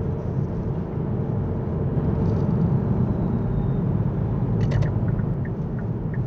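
From 1.96 s to 5.34 s a doubled audio track appears: a second, full-band copy of the sound runs about a tenth of a second behind the original and at roughly the same level. This is likely a second capture via a slower path, or two misaligned copies left in an edit. Every onset gets a flat, roomless echo, and the copy cuts in and out abruptly. A waveform shows each transient repeated at a fixed short offset. A spectrogram shows every event duplicated slightly later across all frequencies, with no decay tail.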